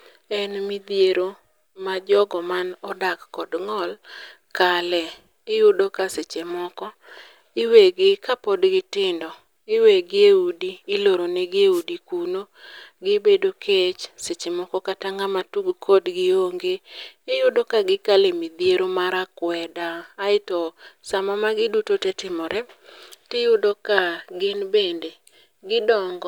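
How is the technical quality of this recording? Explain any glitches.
The speech recording carries one glitch, a wireless microphone noise hit. At 11.71 to 11.84 s, just after "udi iloro negi e", the analogue FM radio link fades as reflected signals cancel. Receiver noise rises through the gap, producing a brief swish of static lasting about 0.12 s.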